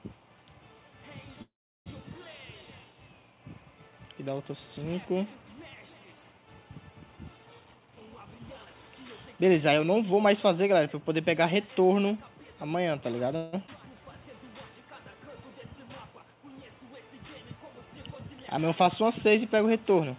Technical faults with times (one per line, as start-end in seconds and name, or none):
1.42-1.88 call audio freeze
7.61-8.90 jitter buffer speed-up
9.32-10.13 jitter buffer speed-up
13.36-13.55 call audio freeze
13.67-13.70 skip ahead
13.82-14.13 jitter buffer slow-down
18.54-20.11 jitter buffer speed-up